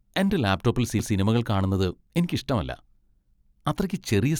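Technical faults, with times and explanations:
0.99 s, CD skip: a jolt or disc flaw knocked the laser onto a neighbouring turn of the spiral, so the player muted for a few milliseconds and resumed elsewhere, heard as a brief tick followed by an abrupt jump in the speech.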